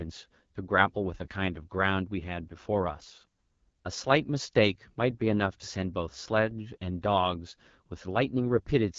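Throughout, the speech carries AMR wideband (HD Voice) codec damage. Its rough, raspy texture suggests one of the lowest modes, around 8.85 kbit/s. A plain low-pass filter wouldn't sound like this: a filter only dulls, whereas this modelled roughness is plainly audible, over a band that stops near 7.5 kHz.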